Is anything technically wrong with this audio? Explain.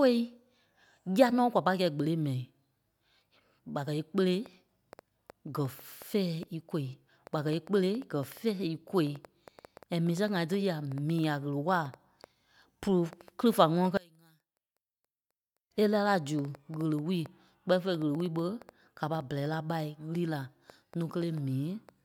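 Yes, there are two faults.

From 4.46 s to 21.90 s, starting just after "ɓa kɛ́ íkpele", a train of clicks runs over the speech: about 70 similar pulses at an uneven pace averaging about 4.6 per second, peaking about as loud as the speech. The likely cause is interference or a faulty connection or power supply. Unlike random crackle, the pulses share one shape and keep ticking through pauses.

From 13.97 s to 15.71 s, one channel is inverted, which is the likely cause of the speech nearly vanishing when the channels are summed to mono. The two opposite-polarity copies cancel, dropping the level by about 31 dB. Unlike a dropout, the sound doesn't go silent, and the problem only appears in the mono sum.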